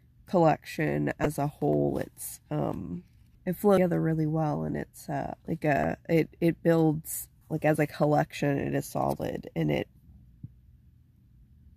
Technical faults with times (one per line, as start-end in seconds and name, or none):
1.23-1.26 damaged data in a compressed stream
3.75-3.78 damaged data in a compressed stream
5.81-5.84 damaged data in a compressed stream